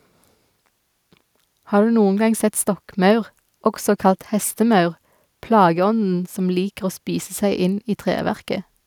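No technical faults can be heard at any point in the recording; the signal stays continuous and steady from its opening to its close.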